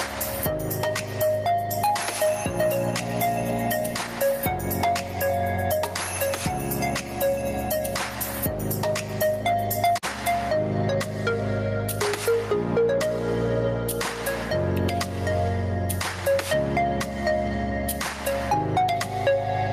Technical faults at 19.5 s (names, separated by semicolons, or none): gain pumping